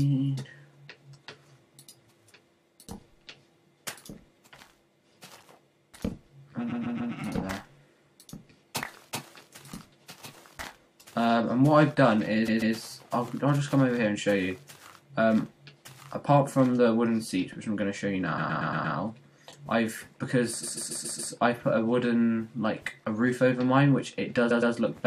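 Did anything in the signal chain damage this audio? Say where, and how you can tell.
Yes, at the codec stream or its storage: there are repeated frames at 6.71, 12.47, 18.37, 20.62 and 24.50 s. Each one is a stutter where a short block plays again two to five times before the audio moves on. The block is about 139 ms at the first, second and fourth spots and 116 ms at the others. That fits a run of five or six compressed frames sent or written more than once, which the decoder simply replays, adding roughly 0.2 to 0.7 s each time.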